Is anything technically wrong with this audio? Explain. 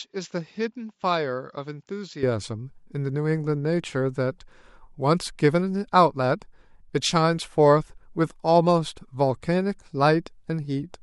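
Yes. From the start to about 2.23 s the speech sounds like it's coming through a poorer microphone, most likely an input switched to a poorer device. That stretch tops out around 7.6 kHz, so it sounds a bit dull next to what follows, and it sits roughly 10 dB quieter, with faint background noise well below the speech. The change happens with no gap, and the fuller sound takes over right after.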